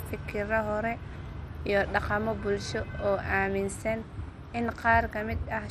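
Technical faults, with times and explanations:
Throughout, MP2 compression: dull, gurgling speech with granular distortion, likely from a low bitrate near 64 kbps; spectrogram shows flickering upper bands and nothing above 14.4 kHz.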